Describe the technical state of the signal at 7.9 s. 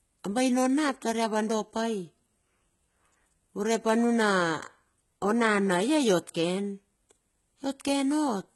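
At 7.9 s the speech is carrying the same damage it has from start to finish: HE-AAC compression, most likely, at a very low rate consistent with something around 16 kbps. The coder keeps only the lower spectrum and fakes the treble by copying lower bands upward under a rough envelope, so the highs are there but don't match the real harmonics. Sibilants come out gritty and metallic, the damage is heavy, and nothing reaches above about 11.8 kHz.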